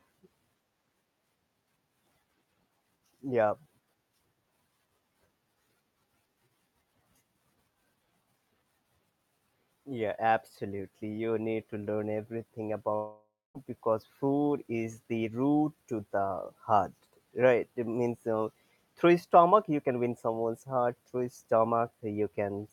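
The most likely cause is a long network dropout: from 12.95 s to 13.57 s no packets reached the receiver, so about 0.6 s of speech was lost. After "need to learn everything", the receiver stretches the last sound into a buzzy tail that fades away, leaving roughly 0.23 s of silence. The speech then resumes at "because food is the", with the missing stretch never played.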